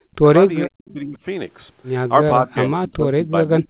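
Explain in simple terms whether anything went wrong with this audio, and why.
Yes, a couple of things went wrong. The main one is speech suppressed in double talk: the voice drops sharply from 0 to 0.26 s and from 0.66 to 1.18 s, then sinks again more gently from 2.41 s to the end. That's likely the echo canceller muting this talker because it couldn't tell them apart from the other side's loudspeaker sound.

There's also a brief echo leak around 0.88 to 0.93 s, a faint copy of the voice arriving about 0.46 s late. It's quiet and short, which fits a loudspeaker on one end whose echo wasn't fully removed before being sent back.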